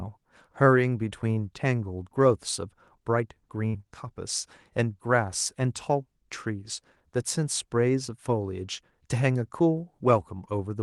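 A burst of packet loss at 3.67 to 3.76 s breaks up the speech: several consecutive packets arrived too late or not at all, so the receiver stretched the last sound for about 54 ms while fading it, then resumed with roughly 60 ms of speech skipped entirely.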